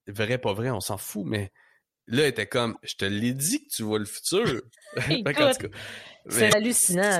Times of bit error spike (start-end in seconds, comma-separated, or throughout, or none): none